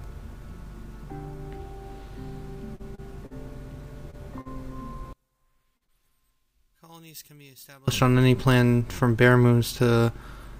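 At 2.75 to 2.82 s comes the first short concealed packet loss. About 40 ms of audio never arrived in time. The receiver carried the last sound forward to cover the gap, then blended back in. It is heard as a brief smear, and whatever fell in that gap is gone. The same thing happens at 3.26 to 3.34 s and at 4.41 to 4.48 s, each time with about 40 ms lost.

Between those, at 2.95 to 3.01 s, is a short stall from a late packet. The packet missed its slot and the jitter buffer ran dry. The last sound was held for about 30 ms until it arrived. Nothing is lost, but the sound hangs on too long, then resumes where it left off. A second stall at 4.11 to 4.16 s holds the sound for about 25 ms.

From 5.13 to 7.88 s the level in mono falls by about 32 dB. The likely cause is one channel inverted. With one side's polarity reversed, everything shared by both channels cancels in the sum. What survives is only the faint difference between them.

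Inside that stretch, two more concealed losses sit almost back to back, at 5.77 to 5.84 s and 5.85 to 6.03 s. Each drops about 40 ms. The second also leaves the timing slightly longer, by a few milliseconds.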